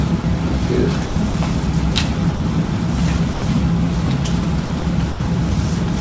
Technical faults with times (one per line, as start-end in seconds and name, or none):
0.22-0.24 sound dropped by the voice detector
1.06-1.34 sound dropped by the voice detector
2.36-2.40 sound dropped by the voice detector
3.34-3.42 sound dropped by the voice detector
4.66-4.82 sound dropped by the voice detector
5.12-5.20 sound dropped by the voice detector